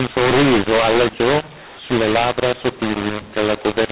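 Speech over telephone-grade G.711, and the whole thing suffers a mu-law and A-law mix-up: it was coded as mu-law but decoded as A-law, so levels get scrambled, the sound turns harsh, and the pauses fill with noise.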